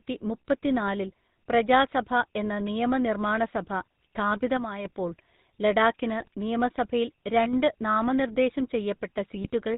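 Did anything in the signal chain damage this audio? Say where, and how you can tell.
Yes. The damage is in the codec stage: the whole clip carries the sound of the GSM full-rate codec. The speech is band-limited to 4 kHz and has a plainly audible buzzy, gravelly texture. This happens because the coder rebuilds the voice from a vocal-tract filter driven by a sparse, regularly spaced pulse excitation, and it fits the 13 kbps full-rate coder. A plain telephone band-pass filter would be dull but smooth. The grit is what points to GSM.

In the network stage, GSM bit errors appear at 6.2 to 6.28 s and at 9.44 to 9.50 s. The first burst lasts about 80 ms and the second about 64 ms, and each hits four corrupted 20 ms frames. Flipped bits in the received parameters make the decoder use wrong filter, pitch and gain values, so the spectrum bends and the level jumps into squawks and gargling. Packet loss would leave gaps or smeared repeats instead, not these harsh, garbled bursts.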